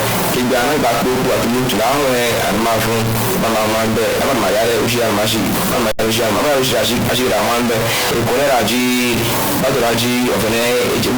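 Speech with a stuck bit throughout: added noise persists even in pauses, unlike tape hiss, likely from a faulty converter line holding one data bit fixed. A Bluetooth dropout silences 5.91 to 5.99 s, about 69.7 ms lost, fitting three dropped packets; the sound resumes later rather than picking up where it stopped, as a likely wireless packet loss.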